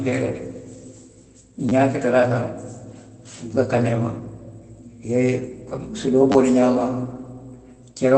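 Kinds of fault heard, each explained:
Repeated buffer: fresh audio failed to reach the playback device in time, so it replayed its last block. Near 1.69 s and 6.32 s a tiny slice plays two and then three extra times, heard as a brief buzzy stutter that fits a 10 ms buffer.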